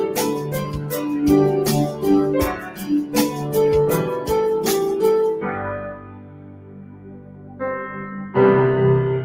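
A noise suppressor applied to music or sounds runs through the whole clip. Built for speech, it treats sustained tones, ambience and tails as noise, so its gain swings by roughly 15 dB. Held material thins and pumps while attacks pass largely intact.

Sound cut by the noise suppressor occurs at 0.39–0.92 s, dipping by about 5 dB, at 2.56–2.84 s by about 7 dB, and most heavily across 5.94–7.61 s, up to about 9 dB down and affecting around a second and a half, where decays sink early.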